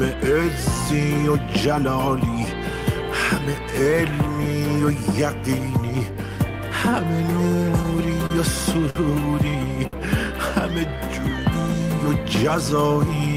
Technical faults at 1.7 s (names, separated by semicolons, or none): none